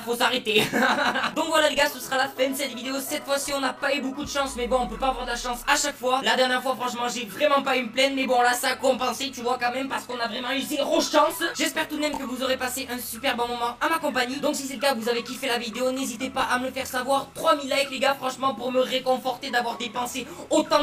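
Channel delay (comb filtering) runs through the whole clip. The sound is rough and slightly doubled from start to finish. One channel arrives late, by roughly 20 ms, and the two channels are then summed to mono. Whatever both channels share cancels at evenly spaced frequencies. The lowest notch sits somewhere around 20 Hz, and further notches follow at regular intervals up the spectrum. Because the delay never changes, the notches stay fixed, and the colouration does not move.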